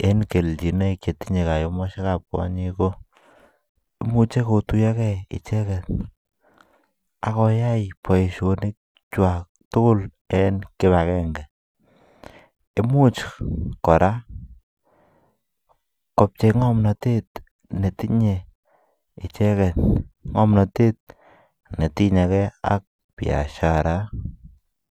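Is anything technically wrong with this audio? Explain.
No, nothing technically wrong can be heard here.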